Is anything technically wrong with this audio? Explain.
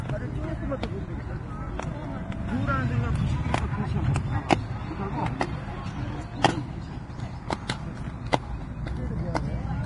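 Yes. Throughout the clip there's heavy Vorbis compression damage, likely at a low bitrate of around 30 kbps. Nothing is left above 10.6 kHz, and the remaining treble is quantised so coarsely that its detail turns to hiss-like grain. Tones sound roughened and attacks get smeared.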